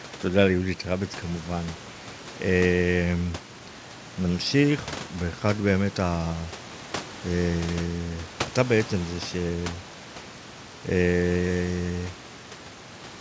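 No technical fault can be heard in the speech: the room noise sits about 15 dB below the talker, and the call path's wideband coding, which fits G.722 at 64 kbps, leaves nothing above 8 kHz, as expected for that link.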